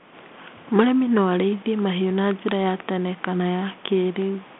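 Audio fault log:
Nothing stood out on listening to this speech recording.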